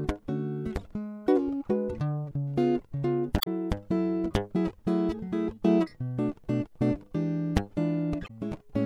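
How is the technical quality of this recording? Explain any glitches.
The music is marred by two short glitches. Damaged data in a compressed stream shows up at 3.36 to 3.48 s and 8.24 to 8.31 s: corrupted bytes make the decoder misread frames and lose sync until it finds the next valid header, producing a brief chirp, squawk, click or short hole each time.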